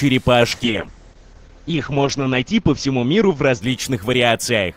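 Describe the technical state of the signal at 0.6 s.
At 0.6 s the signal is inside a call bitrate drop that begins at 0.52 s and lasts to the end of the clip. The call's bandwidth estimate fell and the encoder cut its bit budget sharply, with the coarseness pointing to a fall from around 128 kbps to about 8 kbps, which it holds at its worst for 1.59 s. Coarser coding makes the sound rough and watery, and the audio band shrinks from 20 kHz to 8 kHz, so the top end goes muffled.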